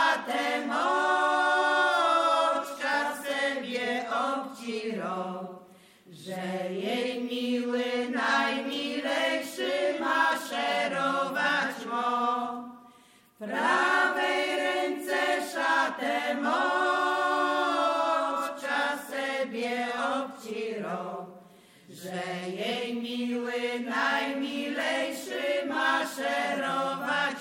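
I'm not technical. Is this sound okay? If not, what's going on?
Yes, this sound is okay, and nothing is going on that needs fixing.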